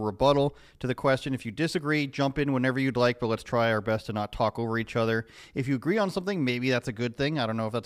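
Two devices in the chain are likely running on unsynchronised clocks that differ by around 70 parts per million, so the speech recording drops or repeats a single sample each time the drift reaches a whole sample. The result is clock slip clicks. Around twenty faint, regularly spaced ticks, roughly a third of a second apart, run from 0.35 s to 7.85 s. They are most noticeable on louder sustained sounds and vanish in pauses.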